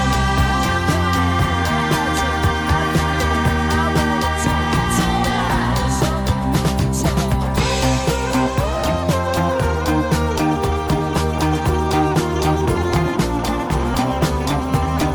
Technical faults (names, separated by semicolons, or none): none